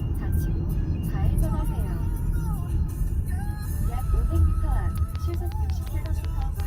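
From 4.98 s to 6.61 s, a train of clicks runs over the everyday sound. About ten sharp pulses arrive at a steady 5.5 per second, peaking about 5 dB above the audio. Interference from nearby equipment is the likely cause.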